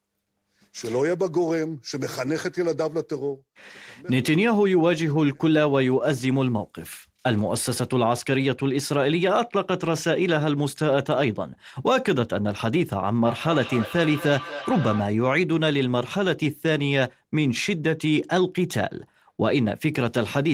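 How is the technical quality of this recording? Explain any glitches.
The recording has one clear glitch, a feedback echo between two devices, from 13.24 to 15.21 s. The speech comes back at a steady interval of roughly a fifth of a second, peaking about 11 dB below the voice. A second device in the room was replaying the call, and this microphone picked it up again. Its echo canceller removes only what its own device plays, so the repeat passed through.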